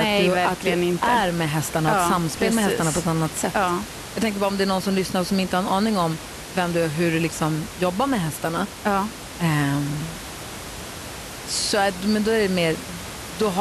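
No technical fault can be heard in the recording. Room noise from the space around the microphone sits beneath the speech, about 13 dB below it.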